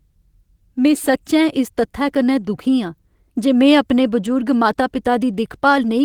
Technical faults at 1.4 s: none

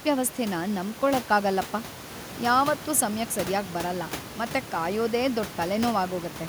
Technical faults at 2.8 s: none

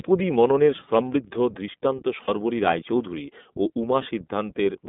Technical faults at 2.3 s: iLBC codec; lost iLBC frames

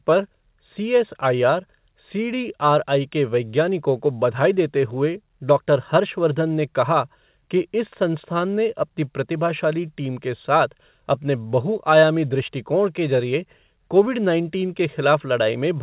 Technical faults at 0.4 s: none

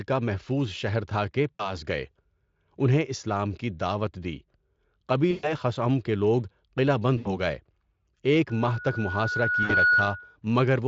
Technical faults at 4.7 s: none

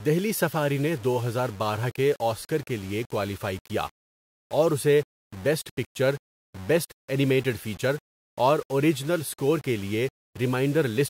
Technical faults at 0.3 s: low bit depth without dither

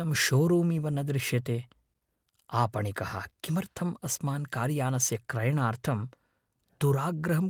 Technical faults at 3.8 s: none

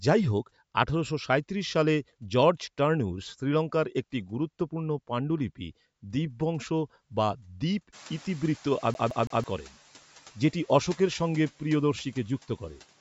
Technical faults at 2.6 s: none

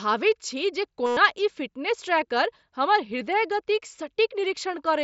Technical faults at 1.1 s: concealed Bluetooth headset packet loss

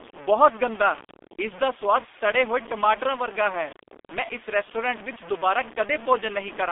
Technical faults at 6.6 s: low bit depth without dither; G.723.1 codec

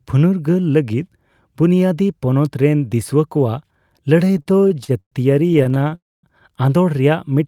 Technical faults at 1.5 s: none

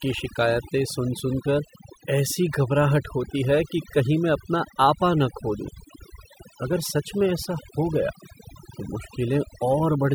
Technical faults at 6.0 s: overdone noise removal

